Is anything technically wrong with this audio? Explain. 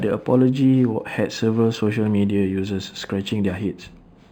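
Yes. Throughout the speech, the top end sounds dull and sibilants carry a faint metallic shimmer. This is imaging from linear upsampling. The rate was raised by joining samples with straight lines, which fits an 11 kHz original brought to 48 kHz. That leaves a mirrored copy of the spectrum between about 5.5 kHz and 11 kHz, roughly 30 dB below the signal.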